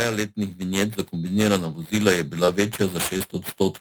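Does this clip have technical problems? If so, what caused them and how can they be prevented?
Yes. The whole recording carries periodic clock jitter: something is wobbling the converter's clock at around 4 kHz, so every part of the speech picks up sidebands spaced that far either side. That gives a gritty, metallic edge, worst on bright sounds, gone in pauses. Keep the clock line clean with proper shielding, grounding and a low-jitter reference.

There's also short concealed packet loss at 2.45 to 2.50 s and 3.18 to 3.22 s. About 20 ms didn't arrive each time, and the decoder papered over it by extending the preceding sound before blending back, so you get a quick smear or wobble. A steadier network path and a deeper jitter buffer should stop it.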